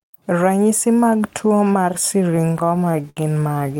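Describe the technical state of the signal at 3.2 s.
At 3.2 s the speech is in the middle of repeated stalls (stutter), which run from 2.31 to 3.70 s. Packets arrived late, so the jitter buffer kept running dry, 19 times in this stretch, and the receiver stretched the last sound to cover each wait, up to 70 ms, about 246 ms in all. That makes the audio drag and stutter. Unlike packet-loss dropouts, nothing is missing: the speech stalls and resumes where it left off rather than skipping ahead.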